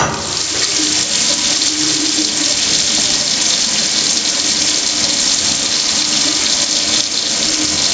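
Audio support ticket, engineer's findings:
Gain pumping throughout the clip. Level ducks by around 10 dB under each loud sound; dynamics squashed. Likely input gain set far too high, with a fast limiter clamping. Waveform: loud and soft parts closer in level. Call-path band limit at 8 kHz, expected.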